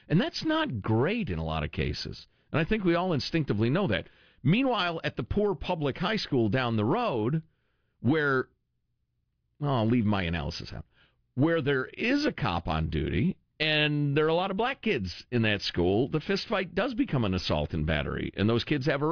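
No technical faults turn up anywhere in this speech, so there is nothing to place in time order.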